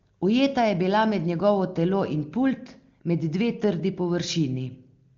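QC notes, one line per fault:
No faults found; the speech passes through an AMR wideband (HD Voice) path whose coding marks are faint at most, consistent with one of its higher rates.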